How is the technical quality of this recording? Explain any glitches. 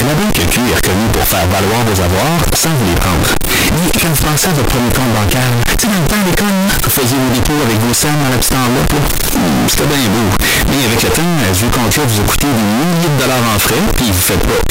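Poor: the recording is badly damaged from start to finish by harsh, overloaded distortion.

Signed and unsigned mixed up, present throughout the clip. The likely cause is 16-bit samples being read with the wrong sign convention, which flips the top bit of every value. Each time the waveform crosses zero it leaps from one extreme of the range to the other. The speech comes out as a loud, gritty buzz, and pauses and soft syllables are just as loud as the rest.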